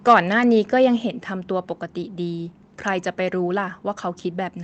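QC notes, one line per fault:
0.09–0.14 s, microphone overload: The input gain was likely set too high, so the loudest peaks ran about 4 dB past the converter's ceiling and their tops were sheared flat, with roughly a tenth of the samples in that stretch pinned at the limit. The flattened waveform throws off extra harmonics that weren't in the original sound, which is why this short burst near the start carries a hard, crackling edge.
1.02 s, microphone volume stepped down: The call software, reacting to the earlier clipped peak, likely cut the device's input gain by 4 dB in a single jump rather than easing it down. Because the change hits the microphone itself, the voice and the room noise behind it fall together in one audible step, and everything after this point sits about 4 dB quieter than the opening second.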